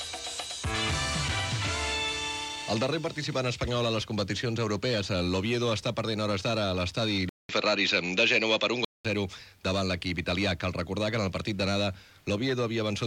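At 7.29 s the recording most likely switched its input to a poorer device, which stayed in use until 9.05 s. The new path passes a narrower band, with nothing above 7.6 kHz, so the sound turns duller. The switch leaves a 200 ms silence, the level shifts by about 5 dB, and a different background noise appears some 50 dB below the signal. At 9.05 s the full, brighter sound returns.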